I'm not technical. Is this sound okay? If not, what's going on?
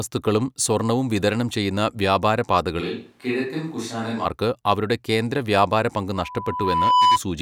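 No. From 2.82 to 4.24 s, after "സ്വർണ്ണവും വിതരണം ചെയ്യുന്ന വ്യാപാര", the speech suddenly turns hollow, roomy and thinner, a bit quieter, with more background hiss. It snaps back at "അവരുടെ കേന്ദ്ര". The likely cause is a switch to a distant microphone, with a faraway mic briefly replacing the close one.

From 6.15 to 7.19 s there is a loudspeaker feedback squeal. A steady 995 Hz tone swells over about a second until it is louder than the speech. A microphone is picking up the loudspeaker it feeds, and that pitch keeps reinforcing itself around the loop.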